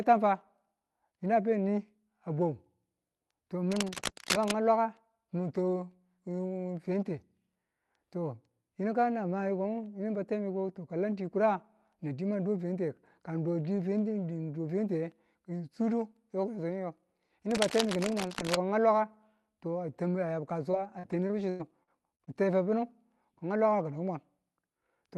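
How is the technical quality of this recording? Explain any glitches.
The recording carries two kinds of glitch: brief scratching bursts at two points and a choppy, robotic stretch near the end. The speech comes through a call codec whose high end stops at about 12 kHz.

Cable scratch noise appears from 3.71 to 4.51 s and again from 17.51 to 18.55 s. The likely cause is a worn cable, connector or control being moved, so its contact resistance jumps around and injects dense, irregular noise. Each burst sits only about 5 dB below the speech and is heard as rustling laid over it for about a second.

Repeated packet loss (robotic sound) runs from 20.71 to 22.29 s, ending just before "n te ba funu". Audio data went missing seven times in quick succession, with the longest hole about 98 ms. Each hole was patched by stretching the preceding sound, which covers roughly 17% of the span. The speech turns choppy, with small pieces missing.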